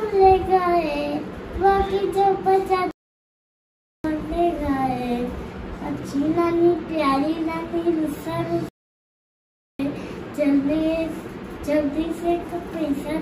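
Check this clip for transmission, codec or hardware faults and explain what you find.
Two playback stalls interrupt the clip. At 2.91 s the sound cuts to silence for about 1.13 s, resuming at 4.04 s; at 8.69 s it drops out again for about 1.11 s, returning at 9.79 s. The likely cause is the player running out of buffered data or its thread being blocked.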